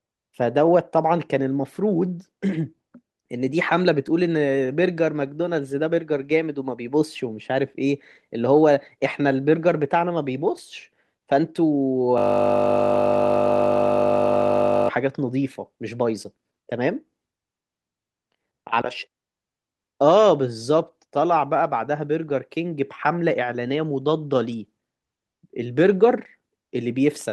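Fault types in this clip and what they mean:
System hang loop: the machine stalled while the audio hardware kept replaying one 20 ms buffer, turning the speech into a steady 50 Hz buzz from 12.18 to 14.89 s.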